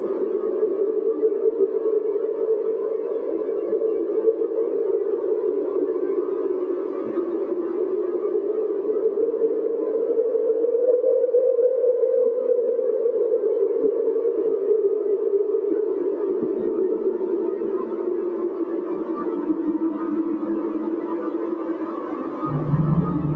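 Nothing goes wrong anywhere in these sounds; they've simply come through an ordinary call chain, with the top end stopping at about 8 kHz in the way a call codec like Opus does at a moderate bitrate.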